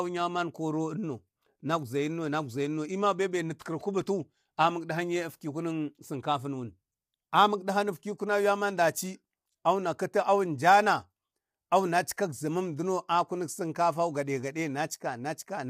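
From start to finish the speech sounds rough and grainy, with noise filling the gaps between harmonics and a thin, synthetic top end. That's likely low-delay AAC compression: AAC-ELD's short frames smear pitch detail, and the damage fits a bitrate around 32 kbps.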